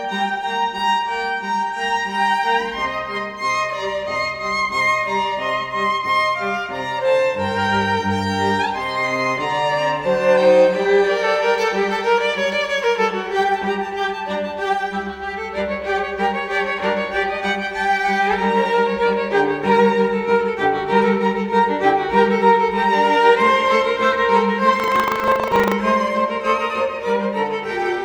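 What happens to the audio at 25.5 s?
At 25.5 s the audio is inside a stretch of buffer tearing from 24.76 to 25.75 s. The software filling the playback ring buffer and the hardware draining it have drifted until their positions cross in every period, so a small slice of each buffer still holds audio from about a tenth of a second earlier, with abrupt joins on either side. The result is a robotic 25 Hz buzz riding on the signal, which suggests a buffer period of roughly 40 ms.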